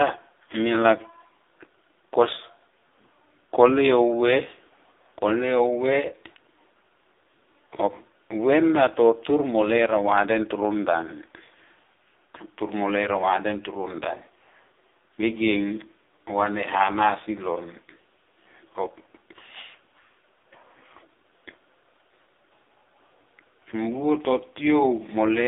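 Throughout the speech, the AMR narrowband mobile codec confines sound to 300 Hz to 3.7 kHz, leaving a flat spectrogram ceiling. Heavy damage, consistent with about 5.9 kbps, makes voices buzzy and synthetic, with harmonics smeared into blocky 20 ms frames.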